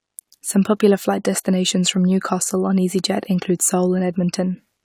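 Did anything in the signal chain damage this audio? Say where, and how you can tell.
No, nothing in the signal chain audibly damaged this speech recording, and no stage from capture to playback left a detectable mark on it.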